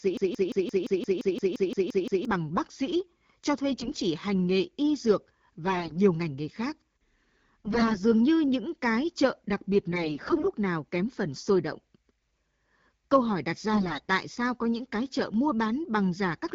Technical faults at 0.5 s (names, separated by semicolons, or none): broken-record loop